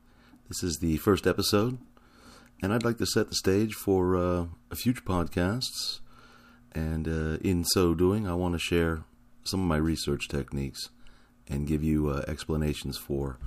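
Nothing technically wrong turns up anywhere in this bit of speech, so there's nothing to flag here.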